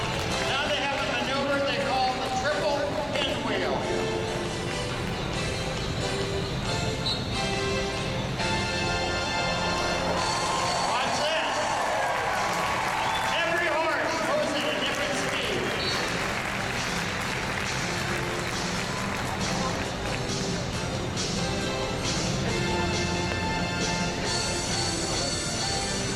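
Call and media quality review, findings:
Loud pop: double pop at 3.16–3.24 s, single pops at 10.33–10.35 s and 23.32–23.34 s, each roughly 15 dB above the sound, which continues underneath. Likely a connector, switch or driver transient, a voltage step shaped by downstream circuitry.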